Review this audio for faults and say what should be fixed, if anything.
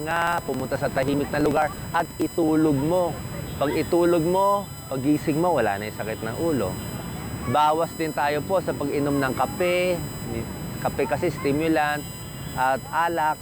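USB whine runs through the whole clip as a fixed 1 kHz tone with harmonics, strongest at 8 kHz and about 20 dB below the signal. It comes from USB frame current leaking through power or ground. On a spectrogram it shows as steady horizontal lines at those frequencies. To prevent it, power the interface separately or break the ground path with a USB isolator.

Periodic USB or driver dropouts occur from 0.11 to 2.48 s, where roughly 10 ms of audio is skipped every 0.054 s, around fifty times, heard as regular ticks. A background task is stalling the bus or driver. The waveform shows evenly spaced splices, and the spectrogram shows thin vertical broadband lines. To prevent them, disable the interfering background process and raise the audio buffer size.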